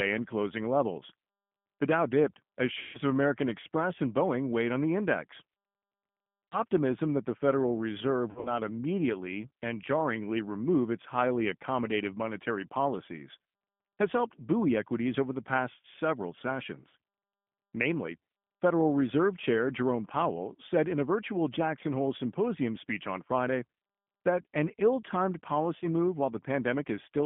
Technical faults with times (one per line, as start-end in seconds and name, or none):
0.00-27.25 G.729 codec
2.79-3.00 VoIP packet loss concealed by the speech codec
6.50-6.60 VoIP packet loss concealed by the speech codec
8.31-8.54 VoIP packet loss concealed by the speech codec
16.89-16.95 VoIP packet loss concealed by the speech codec
25.79-25.86 VoIP packet loss concealed by the speech codec